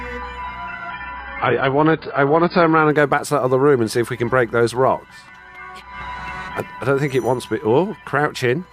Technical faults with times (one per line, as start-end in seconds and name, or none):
0.90-2.90 adaptive stream at a lower bitrate